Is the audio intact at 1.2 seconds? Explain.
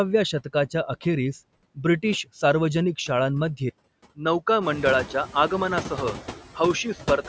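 No. At 1.2 seconds the speech carries noise suppressor artifacts, which run through the whole clip. The suppressor tracks the steady background noise and pulls those frequency bands down by about 16 dB, frame by frame. Between words the noise sinks away. Under the speech it comes back up. The call's microphone processing also limits the sound to 8 kHz and below.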